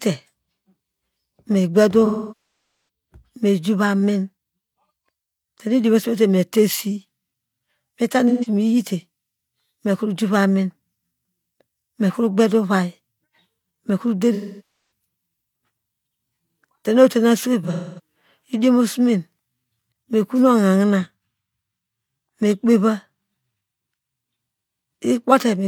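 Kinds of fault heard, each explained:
AAC frame loss with concealment: whole blocks of the compressed stream went missing and the decoder patched each hole by reusing and decaying the last good spectrum, so the sound smears into a hissy, phasey blur rather than cutting to hard silence as a plain dropout would. It happens at about 2.1 s, 8.3 s, 14.3 s and 17.6 s. The last patch is broken up, with its longest stretch about 0.3 s.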